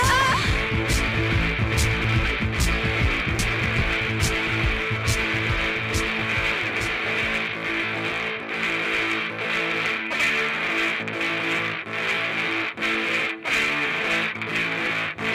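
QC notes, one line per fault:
2.04, 3.39, 12.82 and 14.86 s, dropped buffer (overrun): at each point the sound jumps ahead with no silent gap. About 50 ms is skipped at 2.04 s, about 100 ms at 3.39 s, about 150 ms at 12.82 s and about 50 ms at 14.86 s. The likely cause is the program not reading its samples in time, so the hardware overwrote them and the audio on either side of each lost stretch was butted together.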